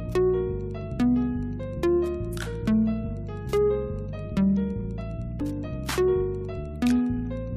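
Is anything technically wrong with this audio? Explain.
Yes. Two faults are present.

Throughout the clip there is Wi-Fi interference: a faint, regular ticking about ten times a second, well below the main sound. A nearby Wi-Fi radio sends a beacon every 102.4 ms, and the audio circuitry rectifies that radio energy into clicks. Mains hum sits at 50 or 60 Hz and its harmonics as a continuous tone. Here the disturbance is a pulse train at just under 10 Hz, which points to a radio beacon.

From 5.40 to 5.42 s there is damaged data in a compressed stream, heard as a short blip or chirp. Corrupted bytes in the encoded stream made the decoder misread or discard the affected frames, lose synchronisation and resume at the next valid frame header. A dropout in an uncompressed stream would be a plain silence or click.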